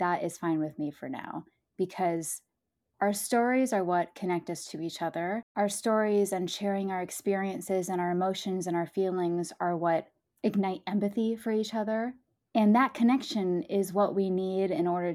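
A single tick at 1.24 s marks a block of digital silence lasting 2.67 ms, which fits an unfilled 128-sample output buffer zeroed mid-stream.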